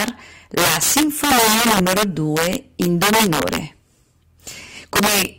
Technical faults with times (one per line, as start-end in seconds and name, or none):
0.00-5.38 integer overflow